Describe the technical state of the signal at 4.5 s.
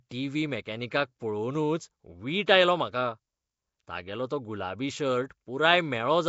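At 4.5 s the speech carries the same rough, hissy halo and smeared, underwater quality heard throughout the clip, with nothing above about 7.7 kHz. The likely cause is Nellymoser compression, the old Flash microphone codec, at a rate that fits 32 kbps: with so few bits per block, weak bands are dropped and refilled with noise. On a spectrogram this shows as a hard ceiling near 7.7 kHz and blotchy, noise-filled patches between the speech harmonics.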